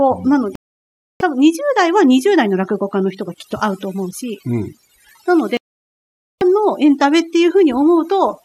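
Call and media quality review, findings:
Twinkling specks over near-silent background, throughout. Overdone noise removal: denoiser set too aggressively, gating frequency bands near its noise estimate and taking quiet speech components with them.

Abrupt silences at 0.55–1.21 s (about 650 ms) and 5.57–6.42 s (about 840 ms). Digital broadcast dropout: receiver muting on lost or corrupt frames; audio from both gaps unrecoverable.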